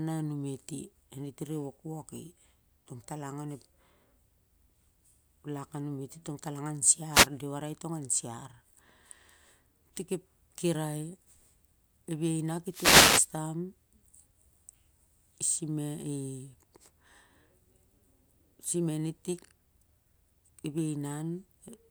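At 7.12 to 7.28 s, just after "tongtalang an", and again from 12.70 to 13.29 s, a wireless microphone noise hit: the FM signal fades, so receiver hiss swells into a static swish. Unlike a digital dropout, noise replaces the sound rather than silence.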